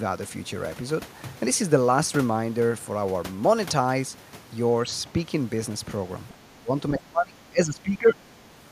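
The echo canceller likely failed under double talk, treating the talker as loudspeaker echo, so this speech clip shows speech suppressed in double talk: the level dips by something like 15 dB from 6.32 to 6.71 s, then drops far deeper, roughly 25 dB, from 6.91 to 8.17 s.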